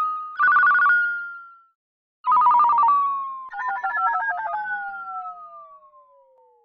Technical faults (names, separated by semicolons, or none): none